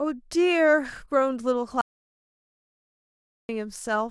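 At 1.81 s the speech cuts to total silence until 3.49 s, an audio dropout to silence, likely lost input written as silence: a flat waveform, blank spectrogram, no room tone.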